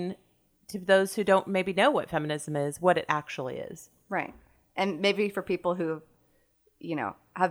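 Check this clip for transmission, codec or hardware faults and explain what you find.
No faults detected.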